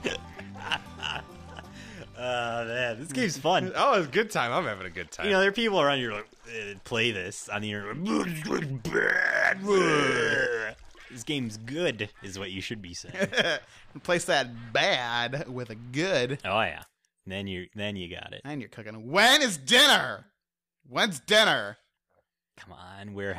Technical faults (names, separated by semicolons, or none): none